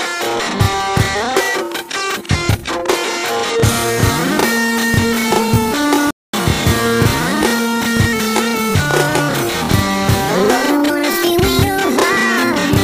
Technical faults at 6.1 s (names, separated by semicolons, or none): playback stall